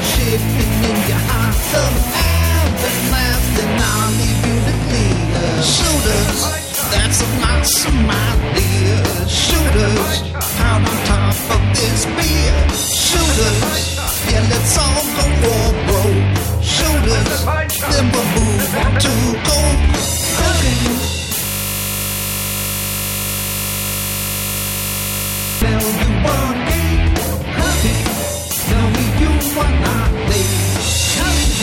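From 21.46 to 25.62 s, a system hang loop: a frozen driver replays one 20 ms buffer as a steady 50 Hz buzz, showing as harmonic stripes and identical waveform cycles.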